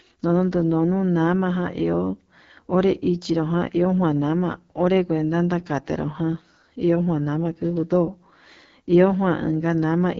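From start to finish the speech carries AMR wideband (HD Voice) codec damage, plainly audible as a rough, raspy texture, which points to one of the codec's lowest modes, around 8.85 kbit/s. Content stops near 7.5 kHz, and the top band is synthesized noise rather than coded detail.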